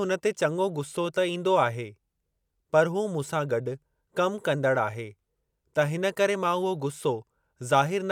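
No technical faults can be heard in this recording.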